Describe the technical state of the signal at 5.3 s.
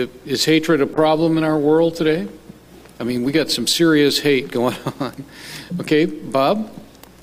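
At 5.3 s the signal is intact, with no dropout, distortion, glitch or other audible fault at that point.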